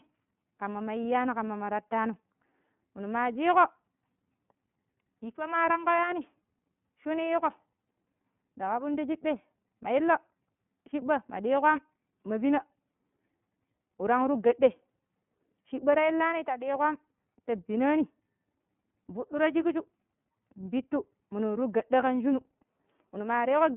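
Throughout, the speech carries plainly audible iLBC codec damage. Each frame, consistent with 30 ms framing at 13.33 kbps, is coded independently, giving a rough, synthetic edge. Passband runs 150 Hz to 3.4 kHz, and a spectrogram shows nothing above 3.7 kHz.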